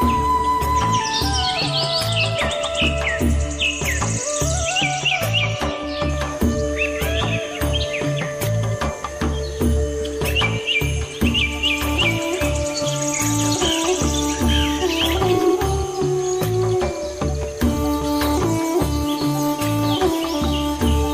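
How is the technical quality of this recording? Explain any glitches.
No glitches or technical faults can be heard anywhere in the recording, so there is nothing to explain.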